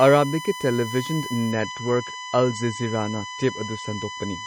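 USB whine runs through the whole of this speech recording as a steady 1 kHz tone, sitting only around 10 dB below the voice. The bus draws current in regular 1 ms frames, and that pulsing leaks through shared power or ground into the audio path as a fixed-pitch whine. From 1.51 s to the end, the stream switches to a lower bitrate: the treble abruptly vanishes above 8.4 kHz and codec artefacts thicken with no gap in playback. This points to the adaptive stream dropping from roughly 128 kbit/s MP3 to around 32 kbit/s when the connection slowed.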